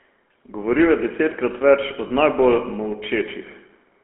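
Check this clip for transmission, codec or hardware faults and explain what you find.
Two faults are present: GSM full-rate coding throughout, and one lost GSM frame near 2.1 s.

GSM full-rate codec, throughout: the speech was squeezed through the original GSM coder, which fits its 13 kbps rate. The coder models the vocal tract and rebuilds the excitation from sparse, evenly spaced pulses, leaving a plainly audible buzzy, gravelly roughness. The band is also held to about 250 Hz to 3.4 kHz.

Lost GSM frames, 2.08 to 2.11 s: a corrupted frame was concealed by repeating the last good frame's settings. That fits a single lost 20 ms frame. The sound briefly freezes into a rough, metallic ring instead of moving on.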